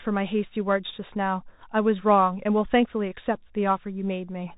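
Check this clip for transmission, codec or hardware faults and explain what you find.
One codec fault runs through the whole clip. Throughout, the speech is muffled, with scratchy s sounds and a granular hiss: Bluetooth CVSD headset codec, one-bit up/down steps, consistent with 64 kbps, cutting everything above 4 kHz.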